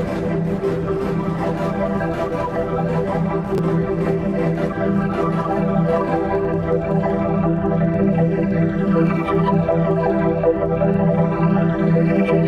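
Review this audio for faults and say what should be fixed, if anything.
Chunks out of order at 3.55 to 3.59 s. One 10 ms chunk plays three chunks late, after audio that should follow it. Nothing is lost. Three hard joins make a brief jumbled moment. Reorder chunks by sequence number or timestamp before playback or writing.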